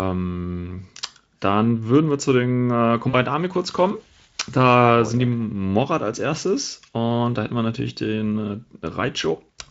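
At 3.09 to 3.15 s, just after "wir zu den äh", VoIP packet loss concealed by the speech codec fills about 40 ms with a stretched, fading buzzy tone or coloured noise rather than silence.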